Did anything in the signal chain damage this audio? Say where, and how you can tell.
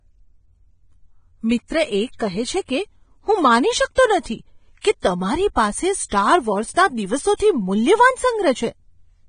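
Yes. The speech is hissy and grainy throughout, with roughened tones and nothing above 9.7 kHz. That points to the codec stage, most likely heavy Vorbis compression at a low bitrate near 22 kbps, where coarse treble quantisation turns fine detail into noise.

Short bursts of hiss smear the attacks at 3.95, 4.81 (just before "કે તમારી"), 6.09 and 7.36 s, each lasting about 23 to 36 ms. This pre-echo also comes from the codec. Quantisation noise sized for a loud onset spreads across its transform block into the quiet just before it.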